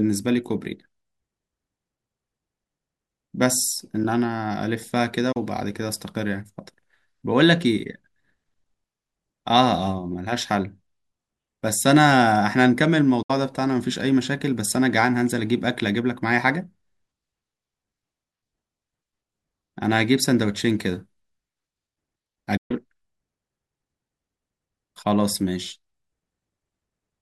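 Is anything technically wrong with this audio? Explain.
Yes. Three digital broadcast dropouts occur, at 5.32 to 5.37 s, 13.22 to 13.30 s and 22.57 to 22.71 s. The receiver muted through corrupted frames, leaving holes of 32, 64 and 128 ms (about one, two and four lost 32 ms frames) with 8 ms fades. The waveform shows flat gaps, and the spectrogram shows blank vertical strips across all frequencies.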